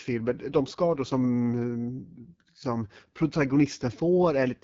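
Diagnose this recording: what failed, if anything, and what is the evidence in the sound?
The codec stage is the culprit: the whole speech clip has that AMR wideband (HD Voice) codec sound. Nothing gets above about 7.5 kHz, and the roughness fits one of the two lowest AMR-WB rates, likely 8.85 kbit/s, where the pulse-driven vocal tract model leaves speech raspy throughout.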